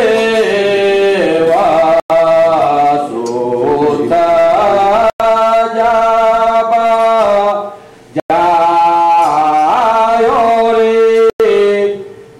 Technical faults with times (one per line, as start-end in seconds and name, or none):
2.00-2.10 gap between chunks
5.10-5.20 gap between chunks
8.20-8.30 gap between chunks
11.30-11.40 gap between chunks